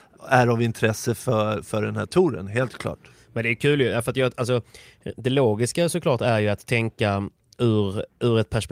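No technical faults can be heard anywhere in the recording.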